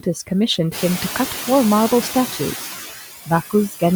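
Noise suppressor artifacts run throughout. The suppressor pulls steady background down by about 10 dB frame by frame, so the noise dips in pauses and swells back under speech. The room noise steps up by about 14 dB near 0.5 s to sit about 10 dB below the speech. From 3.5 to 3.82 s the speech is cut by the noise suppressor, which mistakes parts of it for noise. About a tenth of a second in total is dragged down, by up to about 14 dB, leaving those sounds faint and swallowed.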